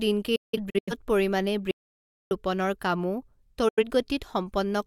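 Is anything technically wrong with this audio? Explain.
Yes, the speech has two kinds of fault: digital broadcast dropouts and an audio dropout to silence.

Digital broadcast dropout occurs between 0.36 and 0.93 s, and again from 3.68 to 3.84 s, just after "ৰোপণৰ কামো". The receiver failed to decode some frames and muted until it got valid data again. In the first event, about 300 ms of speech is lost in several short holes across roughly half a second. The longest hole is 171 ms. The second event loses about 85 ms of speech. Every hole fades out and back over about 8 ms, so the cuts sound abrupt but do not click. The size of the gaps fits the loss of whole codec frames.

Audio dropout to silence runs from 1.71 to 2.31 s and ends just before "ৰোপণৰ কামো". For about 0.6 s the signal drops to silence, with no room tone, and the speech resumes mid-flow. This behaviour points to a loss of input upstream of the encoder while the recorder kept writing samples. 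The likely cause is a brief disconnection or mute. The speech in this gap is gone.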